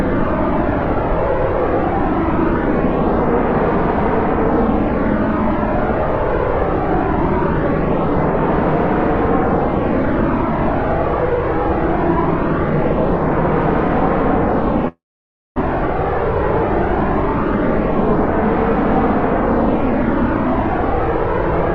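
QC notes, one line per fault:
14.88–15.58 s, long network dropout: about 0.68 s of sound is missing. The gap begins with a brief continuation of the preceding sound that fades within roughly a tenth of a second, leaving about 0.56 s of silence before the audio resumes further on with the lost portion skipped. This is likely a stall in packet delivery, with the receiver's concealment extending the last sound until it ran out.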